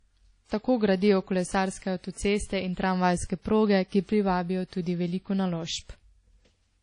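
Throughout the speech, nothing reaches above 10.1 kHz, and first-pass compression artefacts remain. This is likely low-bitrate audio saved at a high bitrate: the sound points to a 32 kbit/s source re-encoded as 192 kbit/s MP3, which cannot restore what was discarded.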